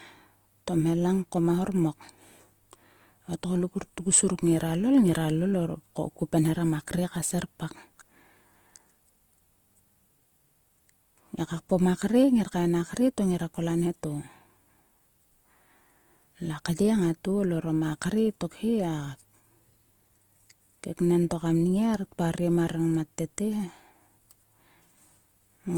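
A speech recording carrying plainly audible Opus compression from start to finish. The damage is grainy and rough, with a noisy fizz on voiced sounds, yet the band stays full: content reaches about 20.1 kHz, so this isn't the muffled, narrowed sound of a speech-mode encoder. Unlike MP3, there is little swirling or watery warble, since bands are filled rather than emptied. The likely cause is Opus's music (CELT) mode, at a rate that fits roughly 24 kbps.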